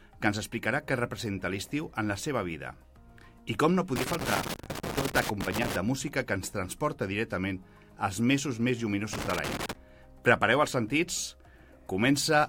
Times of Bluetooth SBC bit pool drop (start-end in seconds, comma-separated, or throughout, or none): none